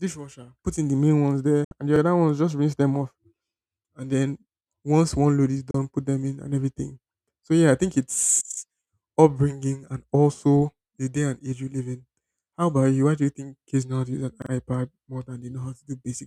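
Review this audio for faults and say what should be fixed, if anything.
Digital broadcast dropouts at 1.64–1.72 s and 5.71–5.75 s mute the speech for 64 ms and 32 ms after a 3 ms fade. The gaps fit two and one lost 32 ms frames that failed reception. Improve signal margin or add error protection and interleaving.

Repeated buffers at 1.96–2.01 s and 14.42–14.51 s replay a 43 ms segment once and then twice, with hard joins that fit a 2048-sample buffer starved of new data. Enlarge the playback buffer or prioritise the audio thread.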